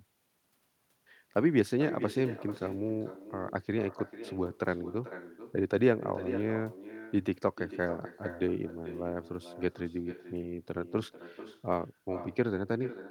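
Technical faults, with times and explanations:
Throughout, echo with no canceller: the far end's loudspeaker feeds its microphone and nothing subtracts it, so the speech returns after roughly 400 ms, about 13 dB down. Each phrase is trailed by a quieter, thinner copy arriving almost half a second late.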